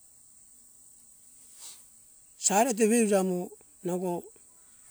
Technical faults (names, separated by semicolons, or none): compressed frames skipped